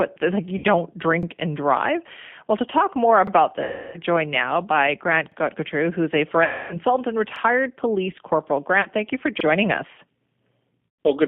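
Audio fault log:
throughout — G.729 codec: an 8 kbit/s codec rebuilds the sound from a vocal-tract filter, a pitch predictor and a few pulses per frame, leaving a rough, slightly synthetic texture. The line band runs from 150 Hz to 3.5 kHz, so everything above is missing.
0.58 s, 3.63 s, 6.44 s, 8.81 s, 10.86 s — VoIP packet loss concealed by the speech codec: gaps of 60, 300, 260, 40 and 130 ms. The first comes after "like you", the second ends before "joined now by", and the third follows "who's a". The decoder extends the last pitch and filter with falling gain, giving a fading buzzy tone or coloured noise, and the sound stays weak briefly after recovery.
1.23 s, 3.27 s, 5.32 s, 7.36 s, 9.41 s — overlapping chunks: every 2 s a new 2-second chunk begins 44 ms before the previous one ends. That 44 ms replays at each join, producing a regular stutter or click.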